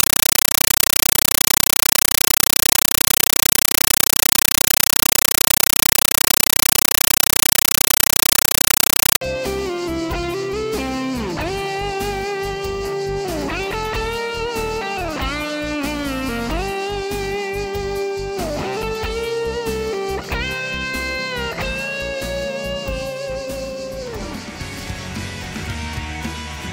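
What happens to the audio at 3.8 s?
At 3.8 s the clip is inside a compressed stream played as audio, running from 0.0 to 9.21 s: an undecoded Dolby Digital bitstream, which fits 384 kbps AC-3, is output as raw samples. Each 8 ms noise burst repeats 31.25 times a second, giving loud, chattering static.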